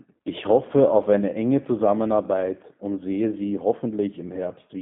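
From start to finish the speech carries G.729 codec damage, plainly audible. The coder rebuilds each 10 ms frame from a vocal tract filter, a pitch predictor and a few pulses, so the sound comes out rough and slightly synthetic, which fits an 8 kbit/s G.729A link. The line passes roughly 150 Hz to 3.4 kHz. On a spectrogram, energy stops at a hard ceiling near 3.4 kHz and thins below 150 Hz, and harmonics look smeared and blocky.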